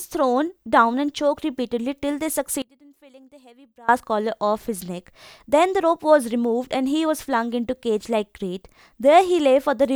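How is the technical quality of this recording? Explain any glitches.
There's one clear glitch. From 2.62 to 3.89 s the speech drops about 26 dB to a faint ghost, likely one channel inverted, cancelling the centred voice when summed to mono.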